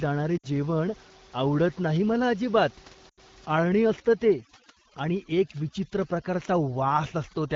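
Speech over an AMR wideband call path, with lost AMR speech frames in two places. Radio errors made frames fail their checksum, so the decoder repeated the last good pitch and vocal tract settings at falling gain. From 0.37 to 0.46 s, just before "जेवण आवडत नाही मला", a 60 ms gap (fitting three 20 ms frames) smears and fades quickly. From 3.09 to 3.20 s, just after "आवडत नाही मला अजिबात", an 80 ms gap does the same, and the voice returns briefly weak or rough. From 3.54 s to the end, overdone noise removal set too strong against the room noise pushes bands near its noise estimate far down, taking quiet parts of the voice with them. The background drops and breaks up into twinkling specks.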